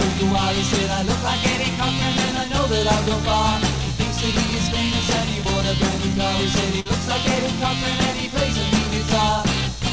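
At 6.80 s, running to 6.87 s, there is a burst of packet loss. Several consecutive packets never arrived in time, so the receiver extended the last received sound for about 54 ms, fading it as the gap continued. Playback then picks up further along, and about 60 ms of the original is simply absent. This produces a brief smeared, decaying patch followed by a small jump. The call codec path passes nothing above 8 kHz, consistent with G.722.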